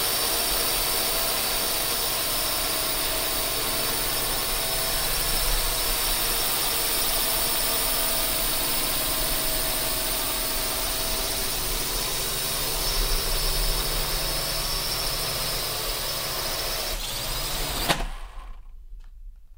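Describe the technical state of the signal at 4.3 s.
At 4.3 s the signal is intact, with no dropout, distortion, clipping or other fault audible in the sound at that moment.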